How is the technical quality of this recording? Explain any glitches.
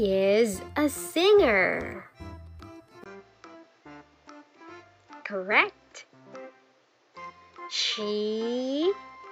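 The quality drops partway through. At 3.04 s the sound turns duller and stays that way to the end, after a 20 ms gap, which is consistent with the input likely switching to a poorer device. The new path cuts everything above 7.6 kHz, and it brings faint new background noise roughly 40 dB below the signal, with no real change in level. On a spectrogram the upper band goes empty from that point and a thin noise floor appears. The waveform shows a brief flat gap at the switch.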